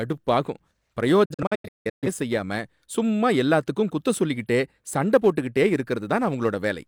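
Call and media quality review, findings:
Digital broadcast dropout, 1.25 to 2.08 s: receiver losing sync or discarding frames that fail checksum, muting until valid frames return. Speech breaks into several short holes over about 0.77 s, roughly 0.5 s lost in total, longest about 170 ms, each with an 8 ms fade. Recovers at "செய்யாம சும்மா எல்லாத்துக்கும் குத்தம்".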